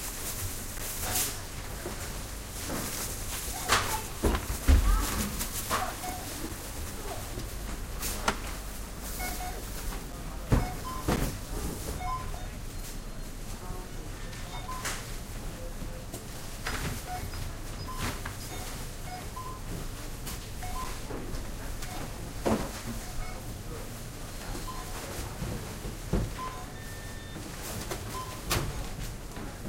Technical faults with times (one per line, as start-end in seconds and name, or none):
0.78 block of digital silence
6.49 block of digital silence
10.12 block of digital silence
11.16 block of digital silence
20.84 block of digital silence